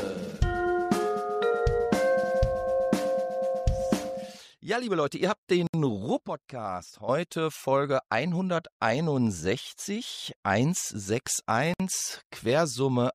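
At 5.67 s and 11.74 s, silences of 67 ms and 60 ms cut the sound: gaps at joins of encoded pieces, where each separately encoded piece kept its start delay and end padding. Unlike a dropout, nothing is lost; the sound resumes exactly where it stopped, and the joins recur every 6.0 s.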